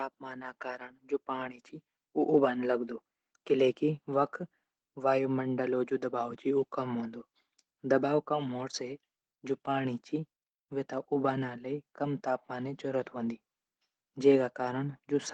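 No technical faults can be heard anywhere in this speech.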